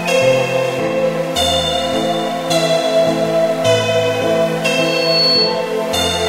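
Loudspeaker feedback squeal at 4.78 to 5.69 s over these sounds: a 4.4 kHz tone swells within about 0.4 s to roughly 5 dB above the audio, as the microphone re-amplifies its own loudspeaker.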